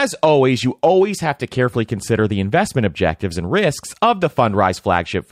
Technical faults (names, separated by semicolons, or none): corrupt frame decoded